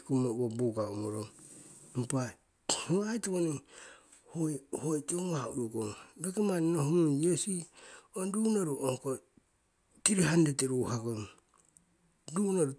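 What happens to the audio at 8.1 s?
At 8.1 s the speech carries on intact, with no dropout, click, distortion or other technical fault at that point.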